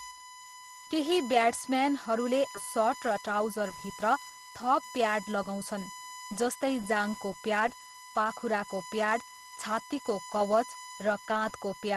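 A USB whine runs through the whole clip: a steady tone at 1 kHz, about 15 dB below the speech, where current drawn in the bus's 1 ms frames leaks into the audio through power or ground. On a spectrogram it shows as a thin, unbroken horizontal line at 1 kHz.

At 2.55 to 2.57 s, right after "केही ब्याट्सम्यानहरूले", there is a skip ahead. Around 0.4 s of audio was dropped with nothing put in its place, so the speech jumps forward abruptly. The waveform shows a hard splice, with no silent gap between the two sides.

From 2.73 to 5.53 s a jitter buffer speed-up follows. The buffer was holding too much delay, so the receiver trimmed many short pitch-period pieces, roughly 0.2 s in total. The speech plays about 8% faster at unchanged pitch and sounds hurried. On a spectrogram the syllables and pauses appear compressed in time while the harmonic spacing stays the same.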